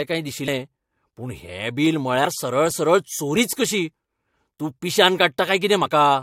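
At 0.47 s, 2.24 s, 3.35 s and 5.84 to 5.87 s, the speech jumps ahead because compressed frames are skipped. The decoder loses whole frames. The first skips about a tenth of a second, the others a few tens of milliseconds.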